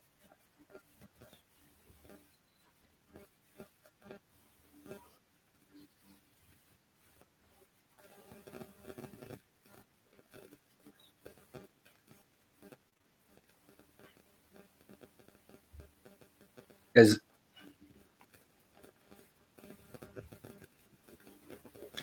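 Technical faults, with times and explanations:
12.89–13.06 s, repeated packet loss (robotic sound): four short dropouts, the longest about 23 ms, each patched by extending the preceding sound, so roughly half of this 0.17 s stretch is synthesized fill, giving choppy speech with fragments missing.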